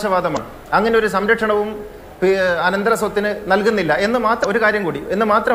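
Damaged data in a compressed stream shows up twice: a short glitch from 0.33 to 0.37 s and another from 4.40 to 4.45 s, each about 44 ms long. Corrupted bytes there make the decoder misread its frames and lose sync until it finds a valid frame header. Unlike a plain dropout, which leaves silence or a clean gap, these bursts come from the decoder working on bad data.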